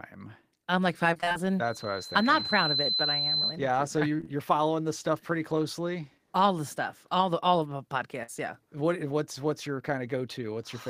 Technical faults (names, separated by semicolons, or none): repeated packet loss (robotic sound); loudspeaker feedback squeal; short concealed packet loss; burst of packet loss